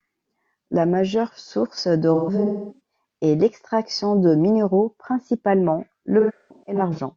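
AAC frame loss with concealment hits this speech clip twice, from 2.14 to 2.80 s and from 6.20 to 6.99 s. The decoder keeps rebuilding missing frames from the last good spectrum, so each stretch turns smeared and noisy, the first dipping toward silence over its longest gap of around 300 ms.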